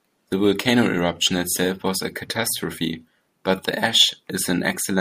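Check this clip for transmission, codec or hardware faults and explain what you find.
No fault can be heard anywhere in this speech recording. Listening through the whole clip turns up nothing that needs explaining.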